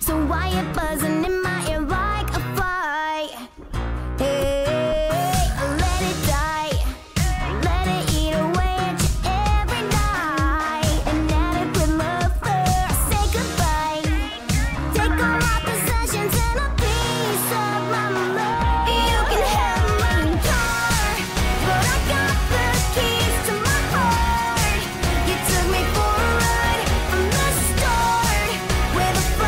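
No technical faults found anywhere in this audio; nothing to flag.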